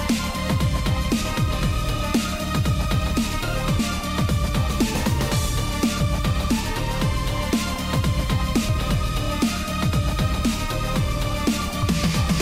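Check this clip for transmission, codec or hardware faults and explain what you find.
Compressed frames skipped at three points: the decoder never played whole frames of the encoded stream, either because they were missing or because it rejected them as damaged. At 3.79 s the sound jumps ahead by roughly 400 ms, at 8.69 s by about 150 ms and at 11.82 s by about 100 ms, which fits runs of roughly fifteen, five and three 32 ms frames. Each jump leaves a brief discontinuity at the join.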